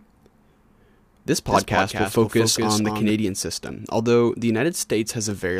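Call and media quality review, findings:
Doubled audio track, 1.5 to 3.1 s, ending just before "system although the". Dry full-band copy about 5 dB down, trailing by around 200 ms, cuts in and out abruptly. Likely a second capture path or edit leaving two out-of-step copies mixed.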